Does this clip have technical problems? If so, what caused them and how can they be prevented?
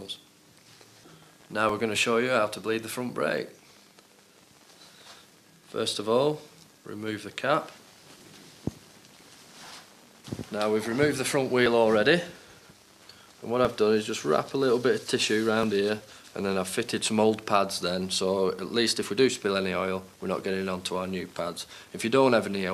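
Yes. Overlap between stream segments causes brief clicks or skips at 1.69, 5.68, 7.68, 9.67, 11.66, 13.65 and 15.63 s, at 2-second segment boundaries. Adjacent segments claim overlapping time, so the player discards a few milliseconds of real audio and the waveform jumps. Aligning segment timestamps exactly at the packager prevents it.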